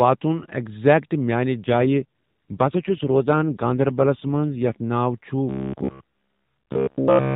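An AMR rate drop runs from 1.60 to 4.77 s. The network appears to push the codec down to a rate near 5.9 kbps, so the voice turns rougher and more synthetic with no gap.

Robotic sound from repeated short buffers follows from 5.49 to 7.35 s. It is likely caused by the last chunk being replayed while most of the new audio is skipped. A rigid 66.7 Hz metallic buzz, fitting a 15 ms buffer, overlays the speech.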